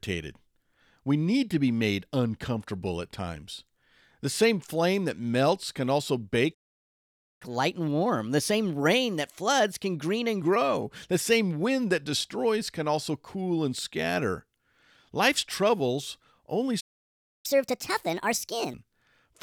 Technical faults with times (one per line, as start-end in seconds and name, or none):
6.54-7.42 playback stall
7.42-10.42 catch-up at higher speed
16.80-17.46 playback stall
17.46-18.74 catch-up at higher speed